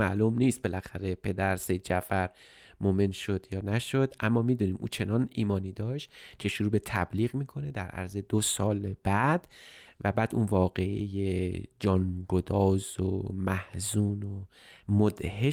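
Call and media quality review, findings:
No transport, capture or playback fault is audible in this speech recording, with level, continuity and timing holding steady throughout.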